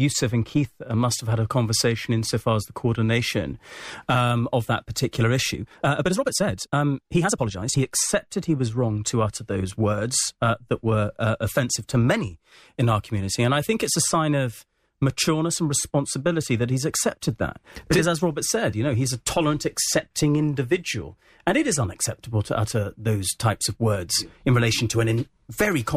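A time-stretched section runs from 5.52 to 7.86 s, between "um of that particular" and "he was wrong to". The speech abruptly jumps to 1.7 times its pace while pitch holds steady, sounding rushed, likely from software dropping short slices to squeeze it shorter.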